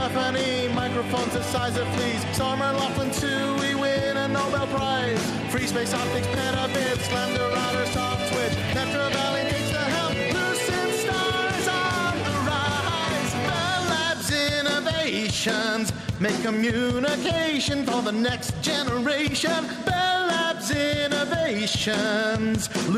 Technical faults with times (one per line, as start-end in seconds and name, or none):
none